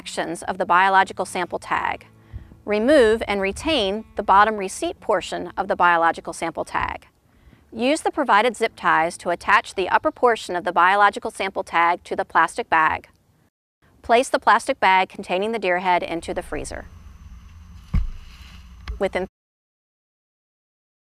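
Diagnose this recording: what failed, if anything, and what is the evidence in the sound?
Nothing failed; no faults heard.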